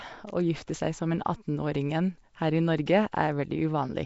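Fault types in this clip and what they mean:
Nellymoser compression: The speech was likely coded with Flash's Nellymoser Asao codec, which quantises short blocks coarsely and fills starved bands with noise. The damage is plainly audible: a rough, hissy halo, a smeared underwater quality, and nothing above 7.7 kHz, consistent with a 32 kbps stream.
Pre-echo: The codec spread quantisation noise sized for a sharp attack across its whole block, including the quiet moment before that attack. At 2.86 s this leaves a short hiss about 11 ms ahead of the onset, which sounds softened and smeared.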